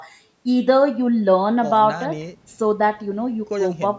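No technical faults are audible.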